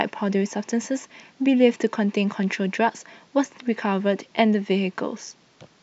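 No technical faults can be heard anywhere in the speech. Nothing in the recording or playback chain breaks in at any point.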